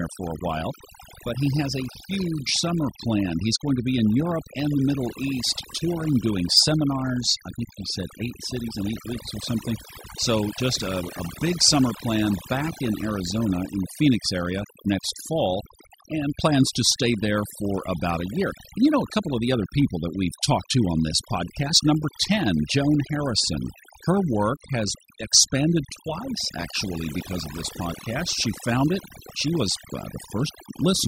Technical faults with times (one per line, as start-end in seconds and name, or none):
0.00-31.07 overdone noise removal